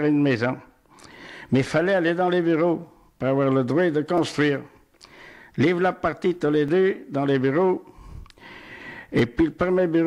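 You'll catch a small stutter at 1.67, 4.18, 6.68 and 9.19 s: overlapping chunks, where each 2.5 s block starts early and replays about 6.5 ms of sound at the join.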